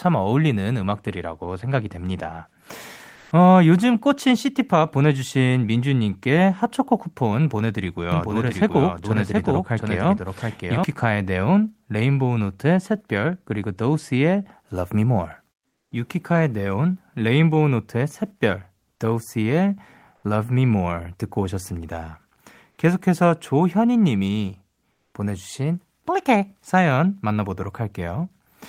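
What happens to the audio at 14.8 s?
Nothing goes wrong at 14.8 s; the speech carries on intact through that moment, with no dropout, click, distortion or other fault.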